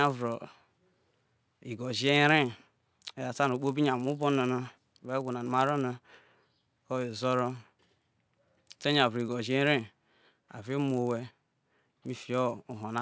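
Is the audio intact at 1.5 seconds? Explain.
No. At 1.5 seconds, as across the whole speech clip, the resampler restarted on every block. Each 10 ms block was converted from 48 kHz to 16 kHz with no memory of its neighbours, leaving a small error at every block edge. Those errors repeat at 100 Hz and fuse into a buzz that follows the signal. A spectrogram shows faint vertical striations every 10 ms and a comb of lines at multiples of 100 Hz. The waveform shows tiny steps at the same spacing.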